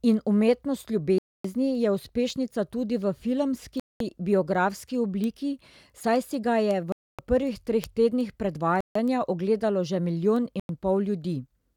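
The speech drops to silence and resumes at 1.18, 3.80, 6.92, 8.81 and 10.60 s, for 0.26, 0.21, 0.26, 0.15 and 0.1 s; these are likely Bluetooth stalls, the headphone buffer emptying while delayed packets were resent.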